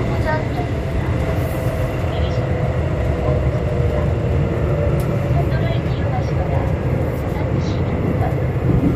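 No technical faults can be heard anywhere in these everyday sounds. Nothing in the recording stands out as a defect at any point.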